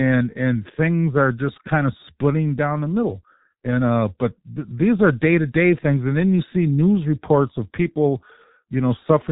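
From start to end, the speech carries G.723.1 codec damage, and it is heavy. This low-rate telephony coder models the voice in 30 ms frames and refreshes that model sluggishly, so voicing turns hoarse and consonants smear together. The muffled quality fits a bitrate around 6 kbit/s. A spectrogram shows energy stopping abruptly at 3.7 kHz with empty space above, and blocky, frame-stepped harmonics where fine detail should be.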